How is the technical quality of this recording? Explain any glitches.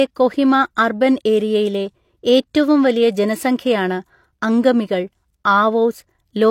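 A single glitch stands out, at about 0.75 s, just before "അർബൻ ഏരിയയിലെ ഏറ്റവും വലിയ". There a short hiss creeps in ahead of the onset and the attack itself comes across softened and smeared rather than crisp. That is pre-echo from a transform codec: the coarse quantisation noise needed for the loud onset was spread across its whole block, so about 14 ms of that noise leaks into the quiet gap before the sound begins.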